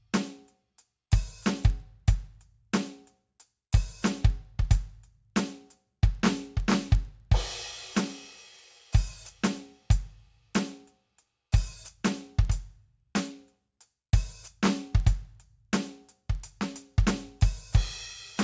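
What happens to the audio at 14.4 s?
At 14.4 s the music carries the same fault as the rest of the clip: the resampler restarted on every block. Each 50 ms block is converted on its own, in a way that fits a 44.1 kHz to 16 kHz conversion, so every block edge has a small error. The result is a rough tick pattern at a steady 20 Hz that follows the signal level. Dropout or underrun clicks would come irregularly and leave gaps. These ticks keep strict time, no audio goes missing, and they vanish in silence.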